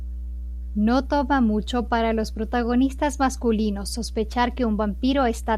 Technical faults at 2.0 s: mains hum

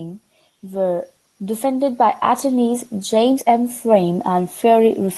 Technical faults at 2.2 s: automatic gain rising

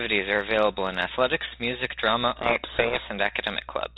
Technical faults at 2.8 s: codec payload misread

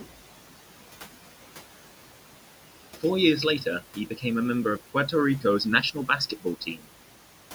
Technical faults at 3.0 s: noise suppressor artifacts

